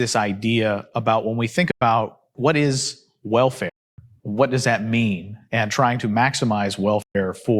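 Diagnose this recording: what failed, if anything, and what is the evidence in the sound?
The speech cuts to silence three times, at 1.71 to 1.82 s, 3.69 to 3.99 s and 7.02 to 7.15 s, with hard edges, then picks up later in the stream, having skipped ahead. That's likely a Bluetooth dropout on the wireless playback link, with packets arriving too late and being discarded.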